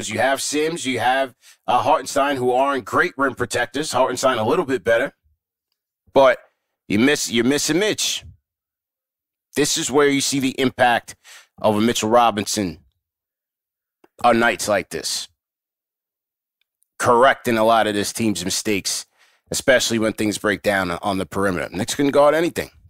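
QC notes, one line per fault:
0.00–5.07 s, channel delay (comb filtering): one channel runs late by around 10 ms relative to the other, and when the pair is summed to mono the shared speech content cancels at regularly spaced frequencies. The first notch sits around 50 Hz, with further notches repeating up the spectrum at odd multiples of that frequency. The result is a hollow, phasey quality over the opening five seconds, caused by those fixed spectral gaps.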